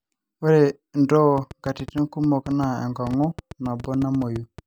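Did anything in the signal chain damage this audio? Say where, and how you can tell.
Yes: a train of clicks runs from 1.38 s to 4.6 s, about 30 similar pops at roughly 7.5 per second, unevenly spaced and peaking about 5 dB above the speech. That pattern likely points to interference in the analogue wiring or a faulty connection or power supply.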